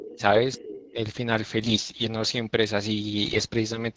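From the very start to 0.21 s, a second voice sits under the speech at about 15 dB below it. This is the other side's voice leaking through, most likely loudspeaker echo that the canceller failed to remove. Over roughly 0.01 to 0.2 s the talker's own speech drops by up to about 25 dB. That is speech suppressed in double talk, likely from the canceller turning everything down while both voices overlapped. On a waveform the envelope caves in abruptly there. On a spectrogram the foreground harmonics fade while a fainter, differently pitched harmonic stack from the leaked voice stays visible.

The same pairing returns a little later. Leakage runs from 0.53 to 0.87 s, again about 15 dB down. The suppression spans 0.56 to 0.98 s and lasts around a third of a second in total. It is deeper this time, roughly 35 dB at its worst, so the talker nearly vanishes in places. The waveform shows near-silent gouges. 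The spectrogram shows the talker's harmonics fading sharply.

From 1.60 to 2.08 s and again from 3.25 to 3.46 s come AMR bit errors. Corrupted low-priority bits in the AMR-WB frames misplace the excitation pulses and skew the fine gain and spectral values. The voice keeps roughly its pitch and loudness but turns hoarse, scratchy and gargly. On a spectrogram the harmonic lines smear into grainy noise and formant bands jitter frame to frame. The waveform stays at similar level but looks ragged and irregular.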